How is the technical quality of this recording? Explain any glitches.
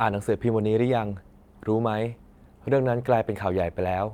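The recording shows no glitches or technical faults of any kind.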